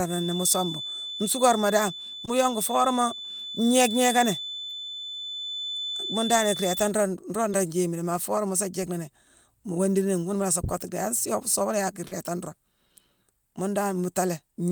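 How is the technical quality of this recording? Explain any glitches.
Three brief glitches interrupt the speech, each a short concealed packet loss: at 2.25 to 2.29 s, 7.51 to 7.55 s, and 12.07 to 12.13 s. In each gap, the receiver extended the preceding sound for 20, 20 and 40 ms, producing a brief smear or wobble. On a spectrogram, harmonics flatten or blur momentarily.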